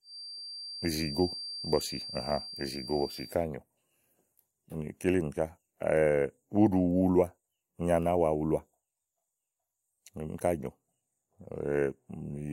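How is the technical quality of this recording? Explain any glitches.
A thin, steady whistle near 4.7 kHz sits well beneath the speech from the start to 3.38 s, swelling and fading slowly in level. This is a feedback whistle, likely from a loudspeaker-to-microphone loop held just at the edge of feedback, so that single frequency keeps sounding without building further.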